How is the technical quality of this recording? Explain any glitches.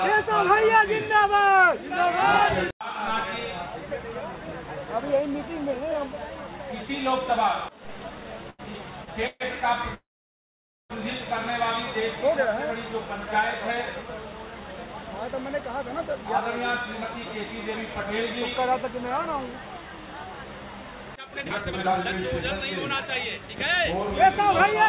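The recording has three network-related glitches, all in the timing of the audio. It is also band-limited, with nothing above 4 kHz, which fits a narrowband telephone codec such as G.711.

Repeated stalls (stutter), 8.5 to 9.42 s: The sound halts three times in under a second, with about 241 ms of filler in total and the longest hold lasting 132 ms. Packets were arriving later or more slowly than playback needed, so the jitter buffer kept running dry. Each time, the receiver stretched the last bit of sound to bridge the wait. Nothing is lost, but roughly a quarter of that stretch is filler, so it drags and stutters.

Call audio freeze, 9.94 to 10.92 s: The audio stops for nearly a second. A brief tail of the previous sound decays into about 870 ms of silence, and then the audio resumes exactly where it left off. This is likely a single long packet delay that emptied the jitter buffer, and playback falls about 954 ms behind as a result. 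No content is missing; a gap has been inserted.

Jitter buffer speed-up, 21.21 to 22.05 s: For under a second the audio plays at 160% speed while keeping its original pitch, so it sounds rushed. The buffer was holding more audio than its target. To catch up, the receiver cut out many tiny pitch-period-length pieces in quick succession, discarding about half a second of audio in total.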